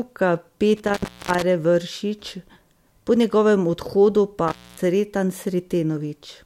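At 0.76 to 1.43 s, and again at 4.48 to 4.79 s right after "po njegovem odhodu pa", the speech is interrupted by an intermittent contact: a loose connection in the cable or plug briefly breaks the signal path. Each break leaves the line open for 0.32 s and 0.26 s respectively, with crackle at the edges and faint hiss underneath. That ragged crackle and residual hiss set it apart from a clean digital dropout, which falls to true silence.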